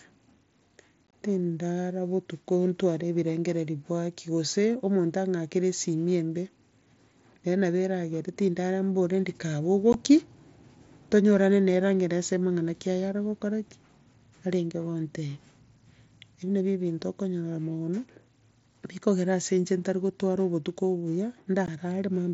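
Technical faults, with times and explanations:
1.09–1.12 s, 9.93 s and 21.66 s, unconcealed Bluetooth headset packet loss: voice packets between headset and phone dropped, and the receiver filled the gaps with silence or an idle pattern instead of patching them. At 1.09 s about 45 ms goes missing in bursts across roughly 60 ms, the longest hole 22.5 ms, so the sound chops roughly. At 9.93 and 21.66 s, single 15 ms holes cut in and out abruptly over the light grain of the mSBC link.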